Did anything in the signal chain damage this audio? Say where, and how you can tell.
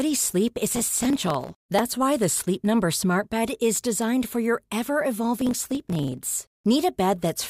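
Yes, processor overload crackle at the driver/buffer stage, 0.74–1.90 s and 5.41–6.33 s. Dense, sub-millisecond skipped buffers cause gritty tearing, not the longer, sparser dropouts of packet loss.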